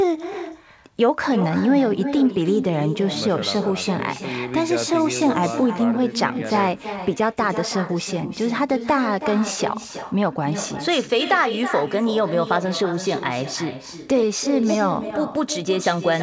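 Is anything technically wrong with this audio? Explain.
Yes. Throughout the clip there is echo with no canceller. The far end is playing the call through a loudspeaker, its microphone picks that playback up again, and nothing removes it, so the speech returns after the network round trip, roughly a third of a second later. The returning copy sits about 10 dB below the direct speech and sounds thinner, trailing every phrase as a shadow. The band-limited sound, with nothing above 8 kHz, fits a G.722 call path.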